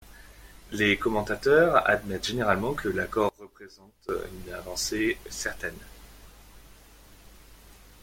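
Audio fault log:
3.29–4.09 s, one channel inverted: for this 0.8 s stretch the speech drops by about 20 dB and turns faint before returning to full level. The likely cause is one stereo channel flipping polarity, so when left and right are summed to mono, the centred speech shared by both channels cancels. All that survives is the small difference between the two channels, which is why the level drops so sharply rather than the sound stopping entirely.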